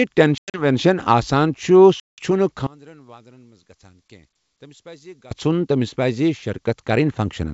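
Packet loss on an ADPCM call hits at 0.38 to 0.65 s, where about 140 ms of speech drops out in gaps over 160 ms (longest 100 ms, around seven packets), and again at 2.00 to 2.24 s, with 180 ms missing (about ten packets). Each gap is an abrupt silence, and the decoder's predictor and step size lose track of the sender's, so speech resumes with brief distortion.

One channel inverted is the likely cause of the collapse from 2.67 to 5.31 s. The centred speech, shared by both channels, largely cancels in the mono sum and falls by about 26 dB, leaving only a faint residue of the channel difference.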